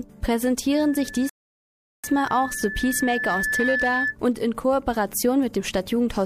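At 0.71 s a loudspeaker feedback squeal begins: a single tone near 1.7 kHz that swells over roughly two seconds until it sits at about the same level as the sound itself, and it lasts until 4.16 s. The microphone is hearing the loudspeaker it drives, and at that frequency the loop gain tops one, so the tone feeds itself. Unlike a steady interfering whistle, it starts quietly and grows on its own.

Partway through the squeal, from 1.29 s to 2.04 s, comes a rebuffering stall. The player ran short of downloaded audio and halted for 0.74 s until more arrived. Everything goes silent and then picks up exactly where it left off. That is what separates it from a dropout, where a chunk of sound would be missing. Here nothing is skipped, and the clip is simply stretched by the pause.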